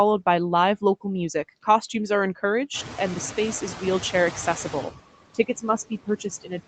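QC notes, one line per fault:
Throughout: noise suppressor artifacts. Steady background is lowered by about 17 dB band by band, sinking between words and returning under them, unlike room noise of constant level.
2.73–4.85 s: noise suppressor catching up. The room noise jumps by about 19 dB shortly before this. At first it is cut by only about 8 dB, then it sinks over 2.12 s as the estimate adapts, a passing lag.
5.34 s to end: speech cut by the noise suppressor. Parts of the speech are turned down with the background, by as much as about 22 dB, so they sound swallowed rather than masked by noise.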